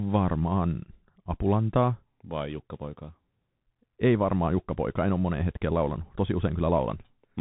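Bluetooth CVSD headset codec damage runs through the entire speech clip. Nothing above 3.8 kHz survives, and the one-bit up-or-down coding, consistent with a 64 kbps link, lets its adaptive step lag behind loud high sounds, so s sounds turn scratchy over a granular hiss.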